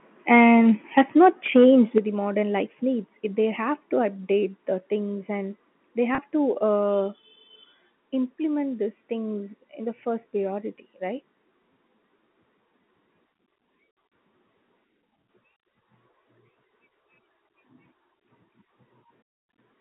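The loudest syllables at 0.33 to 0.44 s and 0.97 to 1.7 s break into a harsh crackle. This is microphone overload. The input was likely set so high that peaks ran about 2 dB and then about 5 dB past the converter's limit, and their tops were sheared flat. At 0.99 s, during the second burst, the level drops by about 2 dB. At 1.98 s, just before "the modern life needs", it drops again by about 7 dB. Further drops come at 4.02 s (about 1 dB) and 7.08 s (about 2 dB). This is the microphone volume stepped down. The call software likely cut the input gain in single steps after finding the microphone too loud or clipping. At 6.15 s, right after "the things and they", a 30 ms gap is filled by a short, slightly held buzzy tone. This is packet loss with pitch repetition. The receiver repeated the last pitch cycle to cover the missing audio.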